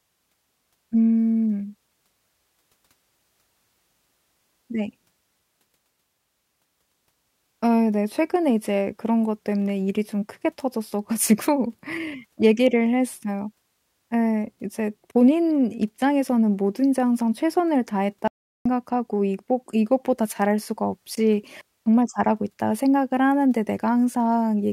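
At 18.28 s the speech cuts out abruptly. Complete silence follows until 18.66 s, a gap of about 0.38 s. This is an audio dropout to silence. Even the room tone vanishes, so the gap sounds dead rather than quiet. The input was likely lost for a moment, through a disconnect, a link failure or a stray mute, while the recorder kept writing silence. The speech then resumes mid-flow. Whatever was spoken in that gap is gone.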